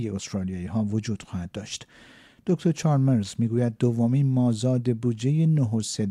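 Nothing technically wrong can be heard in the clip. No event or defect stands out anywhere in the audio.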